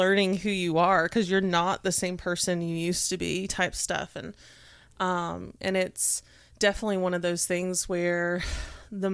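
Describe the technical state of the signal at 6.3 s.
At 6.3 s the speech signal is intact, with no dropout, clipping, glitch or other technical fault.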